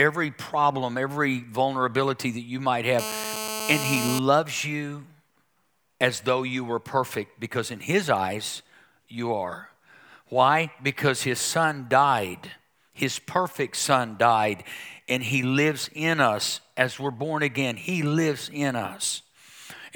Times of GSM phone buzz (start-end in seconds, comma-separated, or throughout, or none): 2.99-4.19